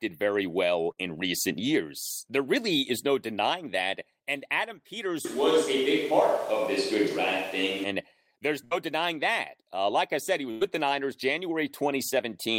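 At 0.91 s, between "very well" and "in recent years", a burst of packet loss cuts about 60 ms from the speech. The receiver fills the gap by continuing the last sound and fading it down before the speech picks up further on. The same thing happens at 8.65 s, just before "denying that", and at 10.51 s, after "like I said he", where the gap is about 100 ms. Unlike a plain dropout to silence, each gap is filled with that smeared tail, and the speech resumes with part of it skipped rather than simply paused.

From 5.25 to 7.84 s the speech turns hollow and roomy, with thinner bass and background noise only about 25 dB below the speech. The level barely changes. This is most likely a switch to a distant microphone after the close one dropped out. What separates it from an EQ change is the reflected room sound and the rise in noise, and both the switch in and the switch back are abrupt.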